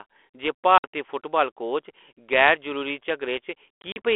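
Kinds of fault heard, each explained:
Packet loss on an ADPCM call: lost packets leave hard silent holes and knock the decoder's predictor and step size out of sync, so speech returns slightly distorted. A 60 ms gap falls at 0.78 s, then 100 ms in short gaps over 3.82 to 3.98 s.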